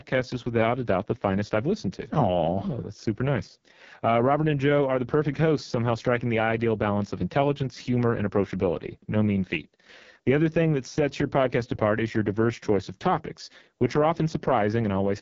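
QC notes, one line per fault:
Throughout: AMR wideband (HD Voice) codec. The speech has been carried at what sounds like the lowest AMR-WB mode, around 6.6 kbit/s, with heavy coding damage. The codec rebuilds the voice from a pulse-excited vocal tract model up to about 6.4 kHz and fakes the band above with shaped noise. At this rate the excitation is too coarse, so the speech comes out rough and raspy, and nothing is present above about 7.3 kHz.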